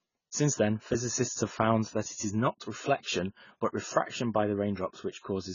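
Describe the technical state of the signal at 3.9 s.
At 3.9 s the speech is still under the AAC compression present throughout, likely heavy AAC-LC coding at a rate that fits about 16 kbps. Starved of bits, the encoder drops everything above 7 kHz and coarsely quantises the rest, so the sound is dull, smeared and warbly.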